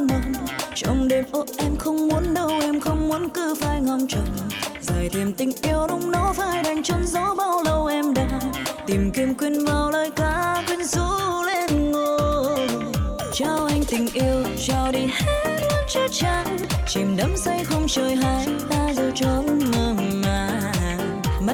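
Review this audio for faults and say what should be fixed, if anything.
Periodic USB or driver dropouts occur between 11.54 and 16.64 s. About seven short ticks repeat every 1.02 s. Each is a gap of a few milliseconds where audio is skipped rather than filled with silence, so the waveform jumps and clicks. The steady spacing points to a background task stalling the USB bus or audio driver on a fixed schedule. To prevent this, disable or reschedule that polling task and use a larger driver buffer.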